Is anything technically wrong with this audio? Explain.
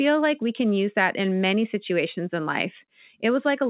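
No, nothing here is technically wrong; it's just speech carried over a G.711 mu-law call path at 64 kbps, so there's no content above about 4 kHz, which is simply how that phone-grade codec works.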